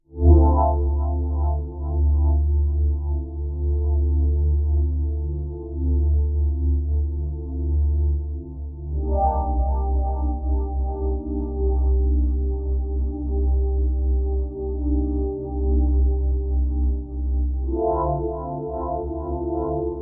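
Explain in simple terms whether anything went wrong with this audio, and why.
Nothing went wrong here; these sounds come through with no glitches, dropouts or other technical trouble to point to.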